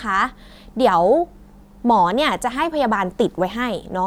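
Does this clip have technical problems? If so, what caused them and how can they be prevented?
No, nothing stood out as a technical problem on listening, so there is no cause to trace or prevention to suggest.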